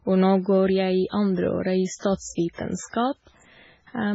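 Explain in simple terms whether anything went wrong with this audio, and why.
Yes. The whole recording sounds dull and watery, with nothing above about 7.7 kHz, which is likely heavy MP3 compression stripping out detail to save space. Around 1.99–2.03, 2.53–2.57 and 2.90–2.93 s, a short hiss creeps in just before sharp sounds, which is pre-echo: the codec smears its noise backwards ahead of each attack.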